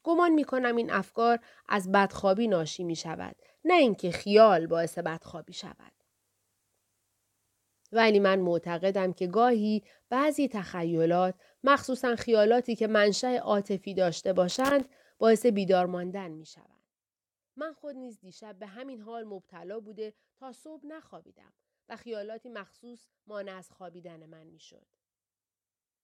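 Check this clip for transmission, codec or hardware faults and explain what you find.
The clip has two hardware faults: loose connector crackle twice and one stretch of zipper noise.

At 14.50 to 14.88 s and again at 17.08 to 17.38 s, a worn or dirty contact in the signal path made and broke connection in quick succession, chopping the speech. Each burst is a short, irregular scratch of crackle.

From 15.56 to 16.88 s, a level cut of about 20 dB was applied in 1 dB jumps, around fifteen a second, without smoothing between them. Every jump leaves a small click, so the speech picks up a fine ticking zipper as it fades.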